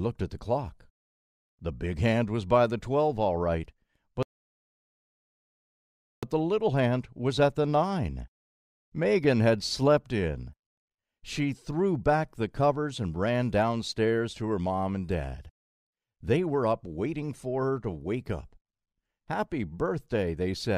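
A playback stall runs from 4.23 to 6.23 s: the sound cuts off mid-flow and the output stays silent for two seconds before resuming. The player likely ran out of buffered data, or its playback thread was blocked, until it recovered.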